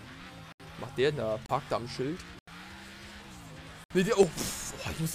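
Sharp single clicks at 0.38, 1.79, 2.63 and 4.23 s are likely dropped samples, each losing well under a millisecond so the waveform jumps. Blocks of digital silence at 0.52 s (74 ms), 1.46 s (32 ms), 2.39 s (85 ms, fitting a 4096-sample buffer) and 3.84 s (64 ms) cut abruptly to silence, leaving short holes.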